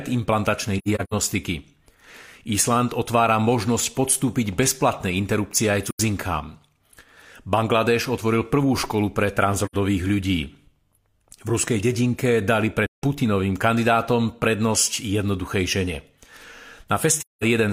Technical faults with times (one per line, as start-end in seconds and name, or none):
0.78-1.14 AAC frame loss with muting
5.88-6.00 AAC frame loss with muting
9.65-9.75 AAC frame loss with muting
12.86-13.02 AAC frame loss with muting
17.18-17.44 AAC frame loss with muting